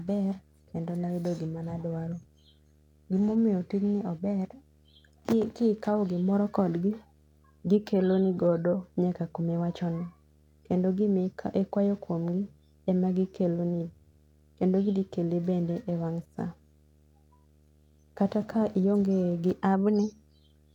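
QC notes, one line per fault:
Throughout, video or display buzz: a steady 75 Hz buzz with hash above it, a screen or video cable leaking into the speech, sitting low, roughly 35 dB down.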